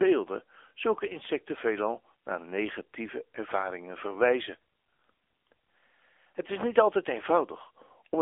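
A speech clip that has passed through the AMR narrowband mobile codec from start to finish. The sound is confined to a telephone band of about 300 Hz to 3.5 kHz, with nothing above 3.6 kHz. The plainly audible buzzy, synthetic coding damage fits an AMR-NB mode near 8 kbit/s.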